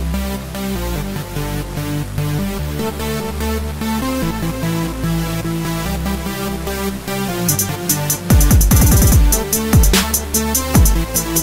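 No technical faults can be heard anywhere in this audio.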